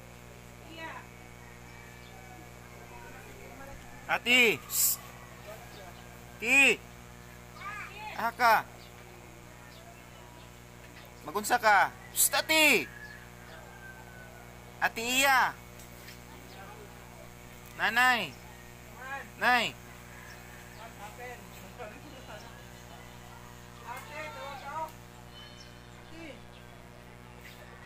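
A steady mains buzz runs throughout, sitting roughly 20 dB below the sound. Sharp 60 Hz switching spikes add harmonics up into several kilohertz, giving a raspy edge.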